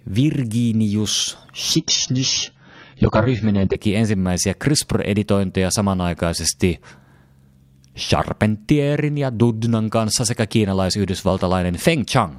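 Speech, and from 1.75 to 3.75 s an adaptive stream drops to a lower bitrate: the top end vanishes above 7 kHz and artefacts swell, consistent with a 16 kbit/s AAC rendition.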